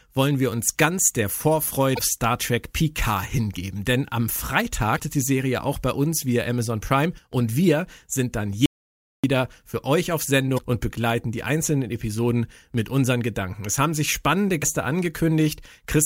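At 1.95 to 1.99 s, and again at 4.95 to 5.00 s, damaged data in the compressed stream throws the decoder off. It can't parse the corrupted frames, loses sync and hunts for the next valid frame header. Each time the speech is broken by a brief glitch of about 44 ms.

From 8.66 to 9.24 s there is an audio dropout to silence. Right after "wir sind dann", the input was most likely lost, perhaps through a dropped link or an accidental mute, while the recorder kept writing silence. The speech cuts off abruptly into about 0.58 s of silence with no room tone, and it resumes mid-flow at "für euch auf". Whatever was said in that gap is gone.

At 10.54 to 10.59 s, between "für euch auf" and "und begleiten die einzelnen", damaged data in the compressed stream causes another decoder resync. It is heard as a short glitch of about 44 ms.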